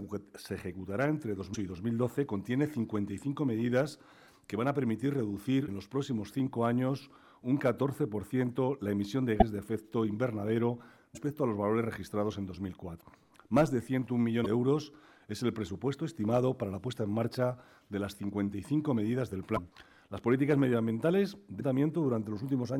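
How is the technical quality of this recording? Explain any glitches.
Not great: there are eight short glitches, at 1.53–1.56, 5.66–5.69, 9.39–9.42, 11.14–11.18, 13.00–13.03, 14.43–14.46, 19.55–19.59 and 21.59–21.61 s. Each is a brief jump forward with a tiny chirp, noise burst or dropout, about one 26 ms MP3 frame long. That points to a broken MP3 bit reservoir, likely from dropped frames: the next frame reaches back for borrowed bits, grabs the wrong bytes and decodes briefly as garbage.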